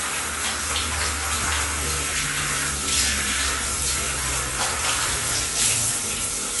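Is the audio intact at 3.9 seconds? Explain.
No. At 3.9 s, as throughout, nothing sounds above 11.5 kHz, with a smeared, warbling texture, likely AAC compression at a rate near 32 kbps. A plain low-pass filter would dull the sound without that warble.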